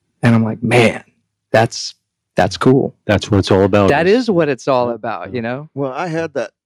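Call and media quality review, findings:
Microphone overload: harsh, crackly edge on the loudest speech peaks at 0.25–0.37 s (just before "I'm like"), 0.73–0.87 s, 1.54–1.64 s, 2.38–2.73 s and 3.1–3.9 s. Likely cause: mic input gain set too high, driving peaks about 6 to 8 dB past converter full scale. Flat-topped waveform on a modest fraction of samples, adding crunch to stressed syllables.

Microphone volume stepped down: abrupt drop in level of speech and background together at 0.28 s (about 2 dB, leading into "I'm like"), 3.9 s (about 6 dB, right as the longest overload ends) and 4.92 s (about 5 dB, between "is what it's all" and "about yeah you"). Single-step cuts with no fade, consistent with call software lowering device input volume in response to detected clipping.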